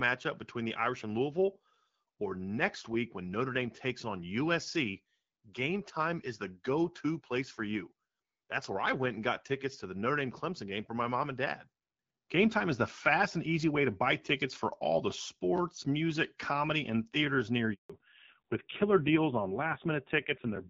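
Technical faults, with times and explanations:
17.74 to 17.90 s, handover gap: right after "comedy and theaters near" the sound cuts out for 160 ms. The call is being passed from one network to another, and no frames get through during the switch, so whatever was said in that slice is simply gone.
17.90 to 20.69 s, fallback to narrowband: from the gap to the end, nothing above 4 kHz survives. The airy top end that the HD Voice link carried up to this point vanishes, and the sound turns dull and a bit raspy, which points to a low-rate narrowband AMR mode taking over after the handover.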